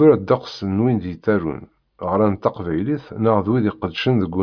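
A short speech recording, with no technical faults to report. Nothing at any point in the audio calls for a time or a cause.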